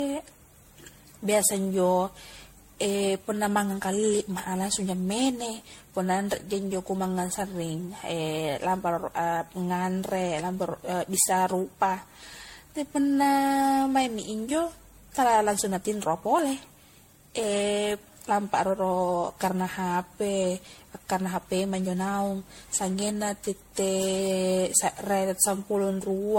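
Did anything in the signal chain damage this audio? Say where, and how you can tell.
Yes, at the codec stage, and throughout the speech: it carries generation loss, likely from being run through a lossy MP3 encoder around ten times, each pass consistent with 64 kbit/s. Each re-encode quantises on a shifted frame grid, so errors pile up into a swirly, hollow, smeared sound with blurred consonant onsets. On a spectrogram, expect a hard ceiling at 16.5 kHz, patchy holes and smearing between harmonics, and softened transients in the waveform.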